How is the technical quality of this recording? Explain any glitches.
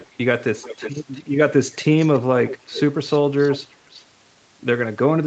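The recording has one recurring fault, an echo leak. A delayed copy of the speech sits under it at 0–0.15, 0.56–1.3, 1.71–1.84, 2.0–2.19, 2.45–2.8, 3.38–3.74 and 3.9–4.03 s. It lags about 0.36 s and sits roughly 15 to 30 dB below the speech. The likely cause is a far-end loudspeaker whose echo canceller let some pickup through. On a spectrogram it shows as a weaker, shifted repeat of the speech harmonics, within the 8 kHz band the call path keeps.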